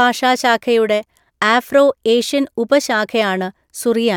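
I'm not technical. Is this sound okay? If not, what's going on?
Yes, nothing in this recording points to a technical fault, so there's nothing to fix.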